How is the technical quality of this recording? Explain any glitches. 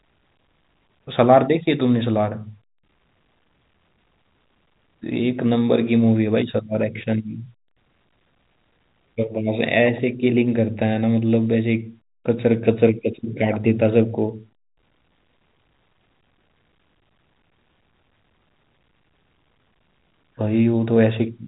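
There aren't any glitches to explain here, just ordinary telephone-band speech whose G.711 A-law coding tops out around 3.8 kHz, as that format does.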